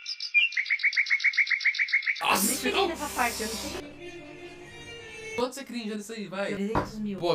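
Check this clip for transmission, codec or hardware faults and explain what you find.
One fault runs through the whole clip: channel delay, producing comb filtering. One channel arrives late by roughly 20 ms. The two channels are then summed to mono. Content shared by both cancels at evenly spaced frequencies. The first notch falls around 30 Hz, and further notches repeat up the spectrum. The result is a rough, slightly doubled sound throughout.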